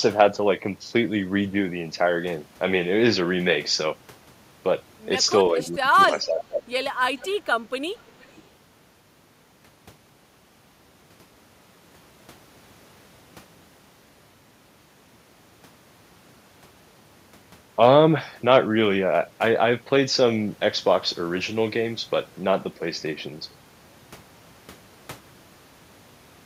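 Between 5.5 and 5.91 s, and again from 6.1 to 6.61 s, the speech sinks by about 10 then about 15 dB in choppy patches. A brief dip near 8.04 to 8.21 s repeats it. This is speech suppressed in double talk. Both ends were likely talking at once, so the echo canceller turned down the near talker along with the returning echo.

Echo leak shows at 5.62 to 5.66 s, 6.1 to 6.14 s, 7.18 to 7.33 s and 8.2 to 8.47 s. Faint scraps of the voice return 456 ms late, about 20 to 30 dB down. A loudspeaker path's echo canceller likely let some pickup through.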